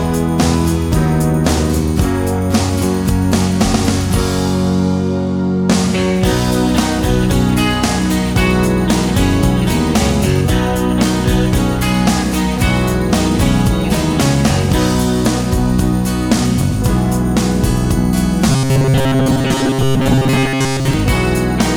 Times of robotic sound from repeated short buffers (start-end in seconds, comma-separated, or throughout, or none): 18.50-20.93